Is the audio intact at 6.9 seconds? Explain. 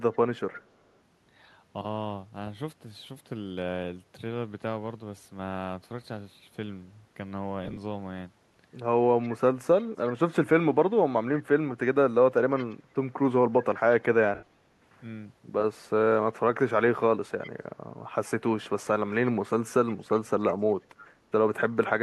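Yes, the speech runs through 6.9 seconds intact, with no dropout, click or other fault at that moment.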